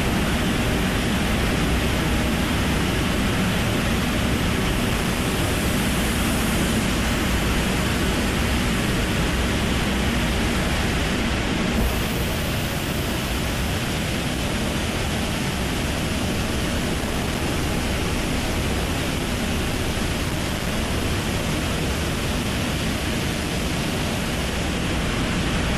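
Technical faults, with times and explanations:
20.23–20.71 s, processor overload crackle: dozens of buffers around 1.5 ms each miss their deadline and drop to silence, giving pinhole waveform gaps and broadband spectrogram streaks.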